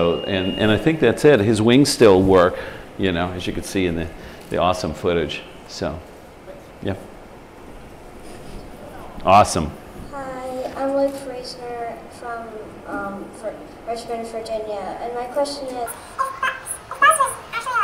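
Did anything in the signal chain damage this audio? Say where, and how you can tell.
Yes. From 15.86 s to the end at 17.84 s the audio suddenly runs at double speed and a full octave (12 semitones) higher. This is audio read two samples at a time, a sample-format conversion error: the reader treats each pair of samples as one frame, halving the length and folding high frequencies back.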